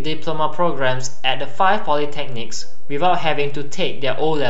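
Right through the speech there's a DC offset of about -14 dBFS, so the waveform sits shifted off zero, eating headroom without any audible sound of its own.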